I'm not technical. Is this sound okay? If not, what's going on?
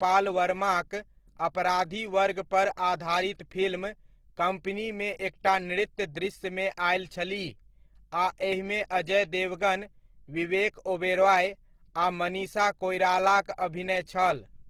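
No, not quite. All the way through, the speech has a rough, grainy, hissy edge, which sounds like Opus compression, likely squeezed hard to save space. The codec rebuilds missing detail with folded-over sound and noise, so everything sounds gritty.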